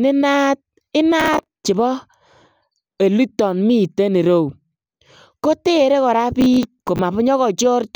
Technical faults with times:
1.20-1.64 processor overload crackle
6.41-6.99 processor overload crackle

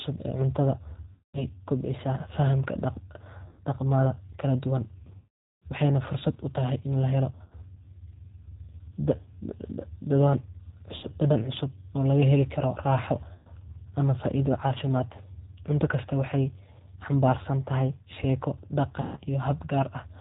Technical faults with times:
0.00-20.20 G.729 codec
1.13-1.46 VoIP packet loss concealed by the speech codec
3.48-3.61 VoIP packet loss concealed by the speech codec
5.17-5.65 VoIP packet loss concealed by the speech codec
7.44-7.57 VoIP packet loss concealed by the speech codec
10.97-11.07 VoIP packet loss concealed by the speech codec
13.34-13.49 VoIP packet loss concealed by the speech codec
19.01-19.22 VoIP packet loss concealed by the speech codec

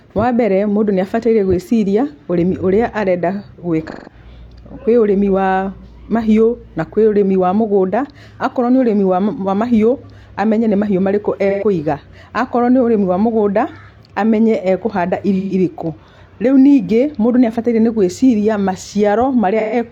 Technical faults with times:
3.90-4.13 AAC frame loss with concealment
11.49-11.64 AAC frame loss with concealment
15.38-15.53 AAC frame loss with concealment
19.59-19.75 AAC frame loss with concealment

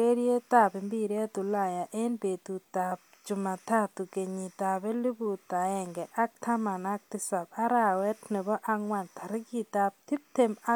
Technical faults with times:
none

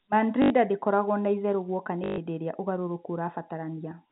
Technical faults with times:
0.42-0.50 packet loss with last packet repeated
2.04-2.18 packet loss with last packet repeated

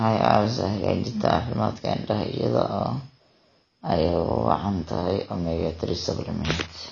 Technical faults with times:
0.00-6.92 AAC compression

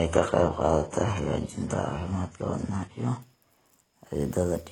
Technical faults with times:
0.00-3.22 adaptive stream starting at a low bitrate

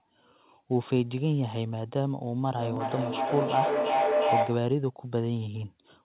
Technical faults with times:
2.56-4.77 feedback echo between two devices

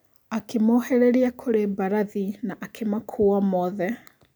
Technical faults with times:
none

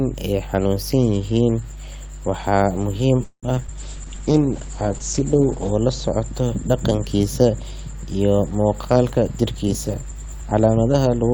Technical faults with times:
0.00-11.33 mains hum
3.23-3.70 repeated packet loss (robotic sound)
3.78-6.37 call bitrate drop
3.96-4.61 jitter buffer slow-down
9.13-11.32 jitter buffer speed-up

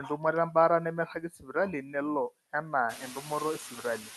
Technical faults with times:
0.00-4.17 noise suppressor artifacts
1.14-1.55 speech cut by the noise suppressor

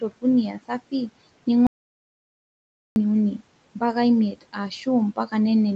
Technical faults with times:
0.01-1.10 speech cut by the noise suppressor
1.67-2.96 audio dropout to silence
4.32-4.87 speech cut by the noise suppressor

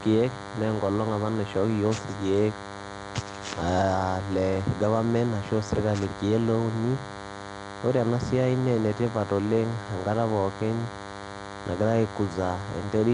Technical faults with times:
0.00-13.13 DECT cordless phone buzz
0.00-13.13 Nellymoser compression

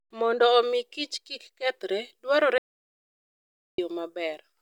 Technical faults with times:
2.58-3.78 audio dropout to silence

